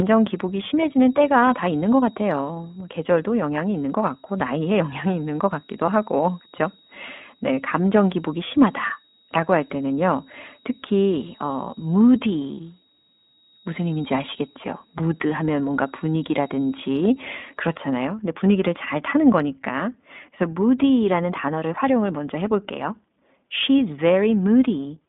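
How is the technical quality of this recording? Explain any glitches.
The recording has clear technical problems: the speech is narrowband and coded, a faint whistle sits behind it for most of the clip, and there is one brief dropout.

The iLBC codec shapes the whole 25-second clip. Nothing is heard below about 200 Hz or above 3.6 kHz, so the speech has a thin, telephone-like band. The codec rebuilds each 20 ms frame's excitation independently, which gives the voice a plainly audible rough, slightly synthetic edge. The coding quality fits iLBC's 15.2 kbps, 20 ms mode.

The feedback whistle runs from 0.0 to 18.1 s and stops just before "근데 분위기를 잘 타는". A steady, thin tone at 3.8 kHz rings behind the speech, well below it at about 15 dB down, wavering slightly in level. The likely cause is a loudspeaker-to-microphone loop held right at the edge of feedback, so one frequency keeps sustaining without building into a howl.

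Lost iLBC frames cause a short glitch from 5.86 to 5.90 s. Over roughly 20 ms, the decoder had nothing new to play and filled the gap by repeating the last pitch cycle blended with noise. This is heard as a tiny held, slightly buzzy smear. Because iLBC frames don't depend on earlier ones, the speech snaps back to normal immediately afterward. The gap's length fits a single lost 20 ms frame.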